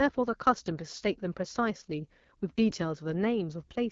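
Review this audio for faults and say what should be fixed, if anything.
The speech runs through an AMR wideband (HD Voice) codec for the whole clip. It sounds rough and raspy, with plainly audible coding damage. That fits a low AMR-WB mode near 8.85 kbit/s, too few bits to model the voice cleanly. Nothing is present above 7.5 kHz. To prevent it, use a rate of 12.65 kbit/s or higher.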